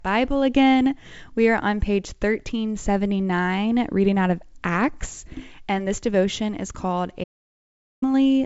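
At 7.24 s the speech cuts off abruptly and the track falls to dead silence, with no room tone or hiss beneath it, until the speech resumes mid-flow at 8.02 s. This is an audio dropout to silence lasting about 0.78 s, and whatever was said in that stretch is gone. Its flat digital silence points to the input likely being lost, through a disconnection, link failure or mute, while the recorder kept writing silence. The wideband telephone character, with nothing above about 7.7 kHz, carries on either side of the gap.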